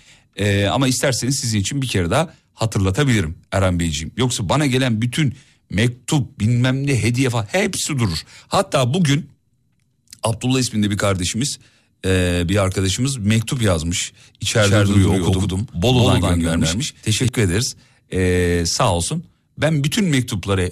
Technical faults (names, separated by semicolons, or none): doubled audio track